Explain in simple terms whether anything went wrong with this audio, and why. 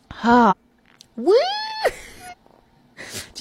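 Twice the sound jumps ahead, at 0.47 s and 2.28 s. These are compressed frames skipped. Whole chunks of the file, each about 46 ms long, were lost or rejected by the decoder. Roughly 0.4 s vanishes each time.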